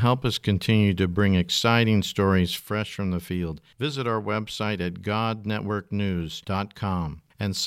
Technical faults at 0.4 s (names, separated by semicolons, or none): none